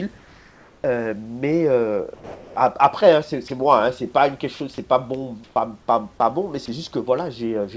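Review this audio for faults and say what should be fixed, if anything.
Comfort noise in place of the background appears from 0.18 to 0.84 s and from 5.44 to 5.56 s. The detailed room hiss gives way to a smooth, featureless wash, about 2 dB quieter in the first stretch and about 6 dB louder in the second. On a spectrogram this shows as a flat, evenly textured band with abrupt edges. It is likely discontinuous transmission filling the pauses with synthetic noise. Preventing it means disabling DTX or improving the comfort-noise spectral match so the background carries through unchanged.

Sound dropped by the voice detector occurs at 2.14 to 2.56 s, 3.48 to 3.50 s, 4.56 to 4.60 s and 6.66 to 6.68 s. The longest drop cuts about 150 ms of speech, and the others cut 10 to 20 ms each. The waveform shows speech envelopes chopped short into low, steady noise, and the harmonics on the spectrogram stop dead. 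This is likely the detector misreading part of the speech as background. Preventing it means lowering the voice-detection threshold and adding hangover time so that soft syllables and word endings are still sent. The G.722 path is audible as its usual coding noise and the usual ceiling at 8 kHz.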